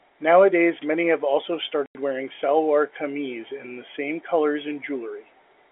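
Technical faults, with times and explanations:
1.86–1.95 s, packet loss filled with silence: after "many have also", the speech drops out for 90 ms before "wearing salwar kameez in", consistent with three 30 ms packets going missing. The receiver substituted digital silence, so the gap starts and ends abruptly.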